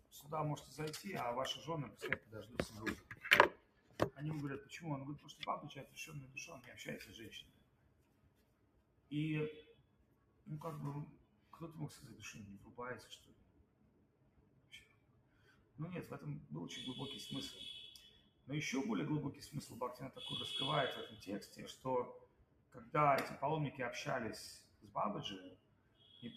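A noise suppressor applied to music or sounds stays active for the whole clip. It mistakes sustained material for noise and pulls it down while onsets pass, so the level keeps pumping and thinning over a swing of roughly 15 dB.

Sound cut by the noise suppressor occurs at 2.2–3.99 s, 5.19–11.56 s, 12.59–15.79 s, 18.1–18.49 s, 21.77–22.76 s and 24.61–26.12 s. Here held or decaying sound sinks by about 12 to 13 dB at its deepest, for anywhere from under half a second to around three seconds within each span, and tails are clipped short.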